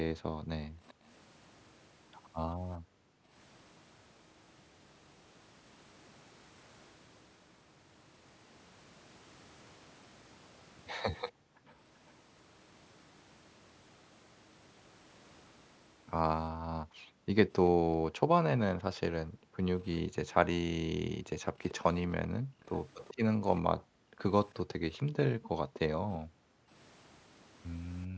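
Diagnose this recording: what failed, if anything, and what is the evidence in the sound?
Background gated by the echo canceller, a call-processing fault: the room sound drops by about 40 dB at 0.19–1.06 s, 2.78–3.32 s and 11.32–11.76 s, and repeatedly from 16.82 s to the end. The canceller clamps the microphone while the loudspeaker plays, then releases.

Echo leak, also in call processing: a delayed copy of the speech trails the original by 387 ms at 0.88–0.93 s and 11.28–12.12 s, very faintly, then more audibly at 21.69–24.97 s. The likely cause is the far end's loudspeaker being picked up by its microphone and incompletely cancelled.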